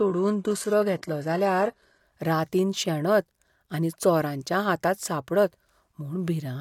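From 0 to 2.0 s the speech has nothing above 12.3 kHz, and its upper treble sounds synthetic and smeared. This is an adaptive stream starting at a low bitrate, likely around 16 kbit/s. At 2.0 s it steps up sharply, without a gap.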